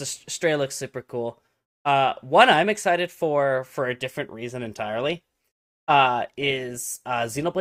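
From 4.62 s, right after "for a different reason", the speech abruptly takes on a more processed sheen, with no gap, lasting to the end. This is an adaptive stream at a lower bitrate, a sudden switch that fits Opus dropping from 64 to 32 kbit/s.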